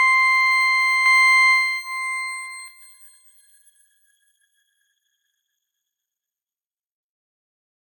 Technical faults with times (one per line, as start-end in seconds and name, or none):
1.06-2.68 doubled audio track